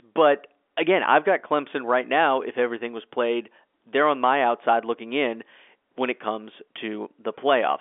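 No faults found; the speech sits in the 250 Hz to 3.5 kHz band expected of G.711 telephone coding, with nothing above 3.7 kHz.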